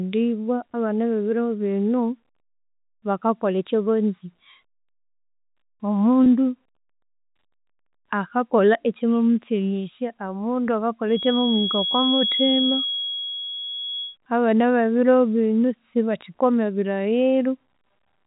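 At 6.24 to 6.26 s there is packet loss with pitch repetition. About 20 ms of audio went missing, which fits a single dropped packet. The receiver filled the gap by repeating the last pitch period. It sounds like a brief, slightly held buzz. The telephone band from G.711 coding remains audible throughout.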